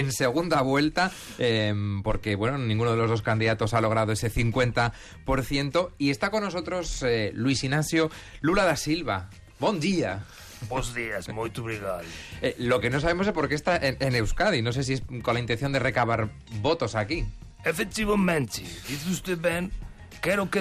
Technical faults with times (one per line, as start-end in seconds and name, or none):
0.00-20.60 MP2 compression